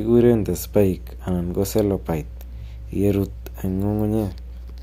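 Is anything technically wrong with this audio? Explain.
Yes, mains hum runs through the whole speech clip. A steady low tone at 60 Hz sits under the speech from start to finish, at roughly 15 dB below it, so it stays clearly audible. It comes from the power line leaking into the signal path, likely through a ground loop or a nearby transformer. On a spectrogram it is an unbroken horizontal line at 60 Hz. In the waveform, the pauses between phrases show a regular ripple instead of a flat line.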